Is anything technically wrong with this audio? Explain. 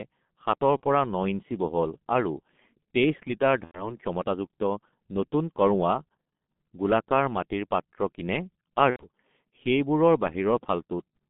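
Yes, two things. The whole clip runs through the G.723.1 codec, and on top of that there are four spots of VoIP packet loss concealed by the speech codec.

The codec damage is heavy and constant. The line band sits between about 150 Hz and 3.5 kHz, so the top end is simply gone. The coarse, slow-updating speech model, which fits a low rate of around 6 kbit/s, blurs consonants and leaves the speech muffled and hoarse throughout.

The dropouts land at 0.77–0.81 s, 3.65–3.96 s, 5.28 s and 8.90–9.04 s, the last one right after "পাত্ৰ কিনে". Each gap points to about 30 ms or 90 ms of missing audio. The decoder papers over it by extending its last pitch and filter at falling gain, so you hear a brief buzzy or coloured smear that fades, with weak, wobbly speech for a moment after audio resumes.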